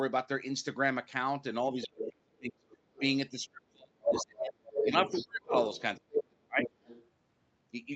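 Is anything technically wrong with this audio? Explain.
Yes, two echo-cancellation faults. Speech suppressed in double talk occurs at 1.74–2.66, 2.99–5.54 and 5.98–6.69 s. The talker dips by as much as roughly 35 dB, in pieces, likely because the canceller ducked both voices during overlap, unlike a steady level drop. The other side's voice leaking through appears at 1.81–2.09, 2.7–3.01, 4.05–5.82, 6.16–6.24 and 6.58–7.07 s. Across these spans it is a second voice, sometimes as loud as the talker, likely loudspeaker echo the canceller missed, distinct from background crosstalk.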